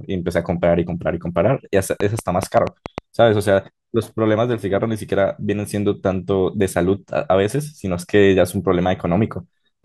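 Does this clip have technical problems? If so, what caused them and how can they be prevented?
Yes, a train of clicks from 2.00 to 2.99 s: around seven same-shaped pops, about six per second, irregularly spaced and about 15 dB above the speech. The similar shape sets them apart from random crackle, and they are likely interference or a faulty connection or power supply. Prevent it by moving the recording chain away from noisy equipment and securing cables and interface connections.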